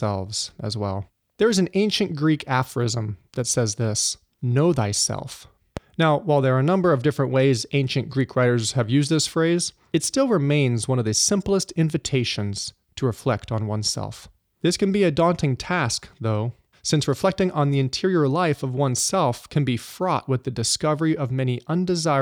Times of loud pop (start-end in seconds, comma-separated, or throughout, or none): 5.77-5.80